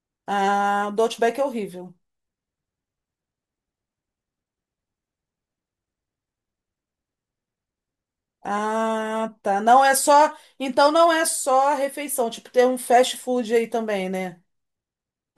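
No technical faults can be heard anywhere in the speech. There is nothing to mark at any point in the recording.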